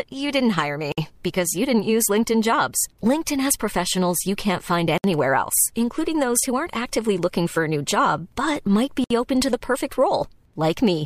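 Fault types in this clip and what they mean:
Gap at a join of encoded pieces: separately encoded chunks spliced untrimmed, so roughly 60 ms silences cut into the speech about every 4 s, then it resumes.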